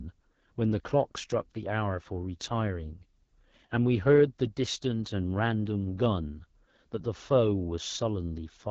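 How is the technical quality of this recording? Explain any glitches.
The technical quality is limited by one fault that runs through the whole recording: AMR wideband (HD Voice) codec damage. The speech was squeezed through a very low-rate wideband phone codec, consistent with about 8.85 kbit/s. At that rate the vocal-tract model and pulse excitation are too coarse, so the speech sounds plainly rough and raspy. The band stops at 7.5 kHz, and the top edge is filled with shaped noise rather than real detail.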